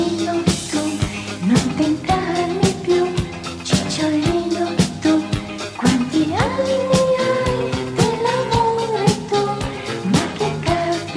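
No technical faults are audible.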